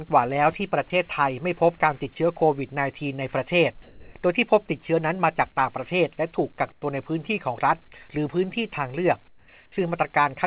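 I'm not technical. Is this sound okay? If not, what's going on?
No. Around 3.82 to 4.14 seconds, sound appears to have been dropped by the voice detector. The sending side likely mistook real sound for background and briefly stopped sending, so about 0.13 seconds of actual sound is lost, replaced by steady noise or near silence before it returns.

At 6.72 to 6.82 seconds and again at 9.28 to 9.48 seconds, comfort noise replaces the background. Transmission likely paused while nothing important was detected, and the receiving end filled each gap with a plain, featureless hiss that is quieter than the real surroundings, more so in the second gap.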